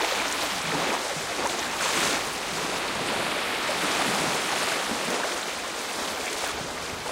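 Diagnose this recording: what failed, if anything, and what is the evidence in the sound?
A single sharp click at 6.33 s points to dropped samples, likely at the driver or buffer stage. Under a millisecond is missing, so the waveform jumps abruptly.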